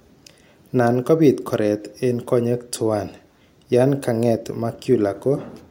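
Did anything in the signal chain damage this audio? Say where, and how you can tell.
No, the recording shows no audible sign of damage from any stage of the signal chain.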